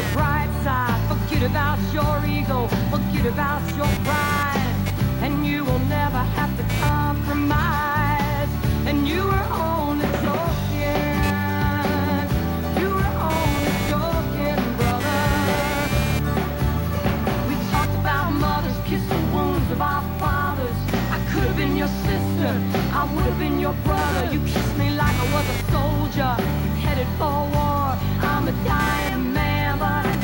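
From start to finish there's computer activity noise riding under the audio: a buzzy, chirping texture pulsing at around 200 times a second and sitting maybe 15 dB below the signal. Processor or graphics load is pushing the shared ground around, so it follows the machine, not the material.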